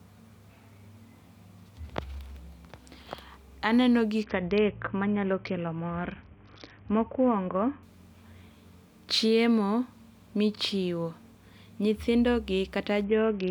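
From 4.23 to 7.83 s and again from 13.04 to 13.51 s, a Bluetooth SBC bit pool drop dulls the speech and adds grit. On a spectrogram the upper bands empty out, as if the link fell to roughly 55 kbps.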